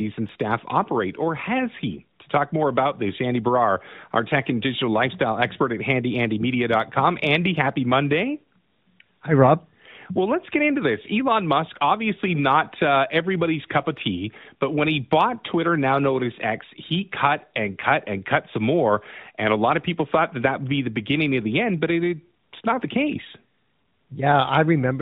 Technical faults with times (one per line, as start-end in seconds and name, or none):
none